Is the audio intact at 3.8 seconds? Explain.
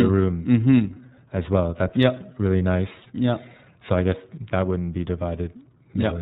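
No. At 3.8 seconds, as across the whole clip, the speech has passed through the iLBC codec, a narrowband VoIP coder that packs each 30 ms frame's excitation on its own, with no help from the frame before. The plainly audible damage fits its 13.33 kbps mode: everything above 4 kHz is gone, leaving a muffled, telephone-band sound, and the voice comes through clear yet rough and synthetic.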